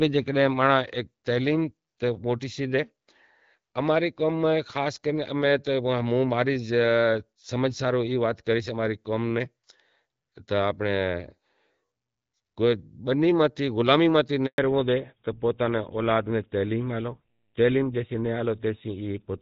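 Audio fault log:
14.46–14.58 s, handover gap: just after "بنی ماتھے غلامی ماتھے" the speech dies away abruptly, leaving 120 ms of silence. The call was passed between networks, and no speech frames arrived during the switch, so whatever was said then is lost.
14.58–19.42 s, fallback to narrowband: from the gap to the end the voice turns duller and rougher, with nothing above 4 kHz. The wider HD Voice band heard earlier, which fits AMR-WB at 12.65 kbit/s, is gone. This points to an older narrowband codec such as GSM full rate taking over after the handover.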